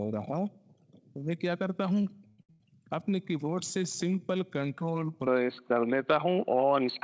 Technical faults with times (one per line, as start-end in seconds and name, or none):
2.02-2.62 repeated stalls (stutter)
5.27-7.03 input switched to a poorer device